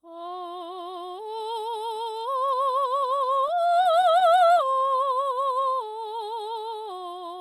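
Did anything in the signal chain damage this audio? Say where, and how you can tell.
Yes. Repeated stalls (stutter) in the network jitter buffer: from 3.01 to 4.79 s the music keeps catching, with brief gaps of up to 15 ms bridged by held sound, because late packets starved the buffer.

Right after, from 4.83 to 5.72 s, there's a jitter buffer slow-down. The music drags at 91% speed with unchanged pitch, stretched by repeated pitch periods, adding 87 ms to rebuild the buffer.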